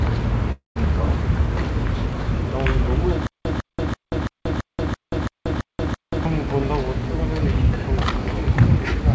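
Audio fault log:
0.52–0.78 s, long network dropout: the sound thins into a fading buzz, then falls to silence for about 140 ms before resuming further on with roughly a quarter second missing. Likely cause: packets stopped arriving, so the receiver extended the last sound until giving up.
3.27–6.25 s, stutter with silent gaps: a 152 ms burst repeats nine times, each followed by 182 ms of dead silence, a steady 334 ms cycle. Likely cause: a stalled stream replaying its last fragment at each retry and then running empty.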